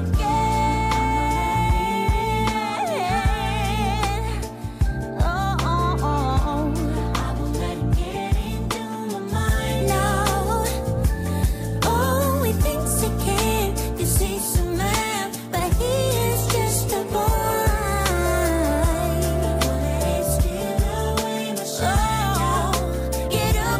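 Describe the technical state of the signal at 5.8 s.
At 5.8 s the signal runs cleanly, with no dropout, clipping, glitch or other fault to be heard at that point.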